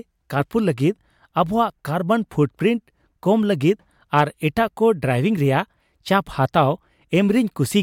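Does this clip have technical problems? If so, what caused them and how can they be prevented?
Yes. The speech skips forward twice, at 1.70 s and 4.68 s, about 3.0 s apart, with about 20 ms missing each time and the two sides butted together. This is likely audio missing between chunks: the recorder or processor handles the sound in 3-second blocks and loses a sliver at each handover. Unlike a dropout, there is no gap of silence, and the regular spacing points to block boundaries rather than random glitches. Overlapping or double-buffered chunk handling prevents it.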